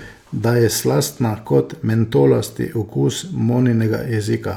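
Nothing in this bit of speech jumps out as a technical problem; it just runs along without any glitches worth pointing to.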